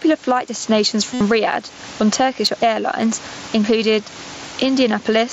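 Gain pumping runs through the whole clip, likely from input gain set far too high and a fast limiter clamping each loud syllable. The level is pulled down by about 15 dB on every strong sound and let back up in the gaps, while the room noise stays far below the speech. Loud and quiet passages end up squeezed toward one level, giving a flattened, breathing quality.

At 0.48 s there is audio missing between chunks, a tiny skip of roughly 7 ms. It is likely caused by a recorder or processor that works in fixed blocks, about a second long, and drops a sliver of signal each time it hands off from one block to the next. The two sides are butted together with no gap, so what you hear is a small jump in the waveform, a brief skip rather than a silence.

From 1.14 to 1.21 s comes concealed Bluetooth headset packet loss, lasting about 68 ms, which fits a run of nine consecutive mSBC frames lost on the headset link. 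The receiver covered the hole by looping the best-matching piece of the last 20 milliseconds or so it had. Over a run this long, that repetition turns into a steady buzzy tone held at full level, followed by a slight warble as real audio resumes and the patched waveform rejoins it.

A second case of audio missing between chunks falls at 2.47 s, again a skip of roughly 7 ms with the same likely cause: a block-based stage dropping a short slice at a chunk boundary and splicing the edges together. It is heard as another small skip, with the mSBC codec's light graininess on louder sounds present around it.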